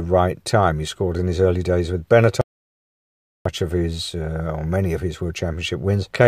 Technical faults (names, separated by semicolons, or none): audio dropout to silence